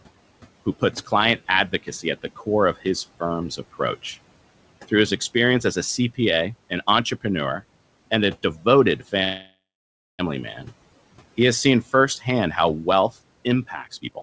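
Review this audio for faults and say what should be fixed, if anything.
The noise suppressor misjudged part of the speech as background between 0.66 and 1.12 s. It pulled the level down by about 15 dB at its deepest, across roughly a tenth of a second in total. Soft consonants and word edges in that stretch come out swallowed and faint rather than clean. This speech cut by the noise suppressor is avoidable: relax the suppressor's aggressiveness or raise its speech-protection threshold, since the room noise sits about 22 dB below the speech.

From 9.24 to 10.21 s there is a call audio freeze, likely caused by packets being held up in transit so that the jitter buffer ran dry. The receiver stretched the last sound into a fading buzz or hiss for about 0.95 s, about 580 ms of which is silence. When the packets resumed, playback picked up where it stopped. Nothing is lost, but a gap is inserted and the delay grows by the same amount. 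Preventing it means fixing the network path's delay spikes or allowing a deeper jitter buffer target.

Between 13.88 and 14.21 s the jitter buffer sped up. It was holding more audio than it wanted, so it cut short pitch-period slices repeatedly and removed about a fifth of a second. Playback there runs at about 151% speed with unchanged pitch, and the speech sounds hurried. This jitter buffer speed-up can be prevented by letting the buffer drain its excess more gradually, with a lower maximum acceleration rate.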